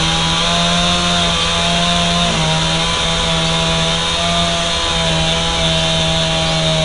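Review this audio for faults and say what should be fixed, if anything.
4-bit ADPCM compression runs throughout: each sample is coded as a coarse step from a prediction, so a gritty hiss rides on every loud passage and sharp attacks distort. Nothing above 10.6 kHz suggests a reduced sample rate. Preventing it means storing the source as uncompressed PCM or a modern perceptual codec at adequate bitrate.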